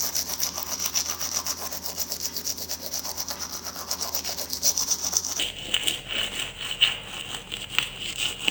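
An everyday sound recording where, from 5.39 s to the end, stereo is read as mono: interleaved left and right samples are played as one channel, so the sound drops to half speed and an octave lower.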